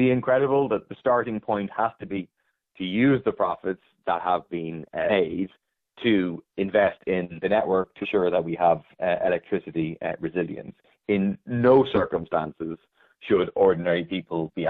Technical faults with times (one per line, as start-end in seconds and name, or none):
2.16-2.19 compressed frames skipped
5.09-5.11 compressed frames skipped
8.01-8.05 compressed frames skipped